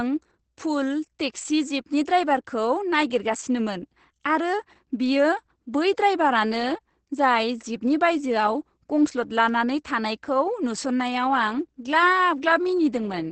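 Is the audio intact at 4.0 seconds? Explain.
No. At 4.0 s, as throughout, the speech carries Opus voice compression: the SILK coder limits it to wideband, with nothing above about 8.7 kHz, and codes the excitation coarsely. The hoarse, slightly robotic texture, which fits a bitrate near 10 kbps, distinguishes it from plain low-pass filtering.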